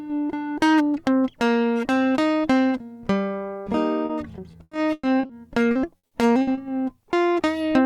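At 4.05 to 4.11 s the music has a short concealed packet loss. About 40 ms of audio never reached the decoder in time, and the receiver bridged the hole by extending the preceding sound before blending back into the real signal. It is heard as a brief smear or wobble in the music rather than a clean dropout.

Repeated packet loss, with its robotic sound, follows from 4.51 to 5.31 s. The stream breaks up five times, and each hole is patched by continuing the last sound before the next loss arrives. About 280 ms of the 0.8 s span is synthesized, roughly 35 percent, and the longest gap is 100 ms. The music turns choppy here, with pieces missing.

The same fault returns from 5.71 to 6.59 s. There are again five gaps, totalling 220 ms of filled audio, about a quarter of the span, and none is longer than 60 ms. The holes are shorter than in the first burst, but the music still has the same stuttering, synthetic texture.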